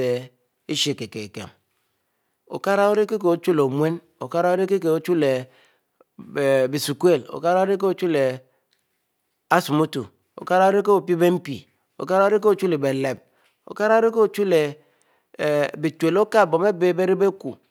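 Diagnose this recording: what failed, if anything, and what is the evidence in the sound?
A buffering fault shows up as chunks out of order at 13.16 to 13.18 s in this speech: a roughly 10.67 ms chunk was written one slot late and plays after its neighbour. Nothing's missing, but the swap leaves three hard joins, heard as a quick garbled flicker.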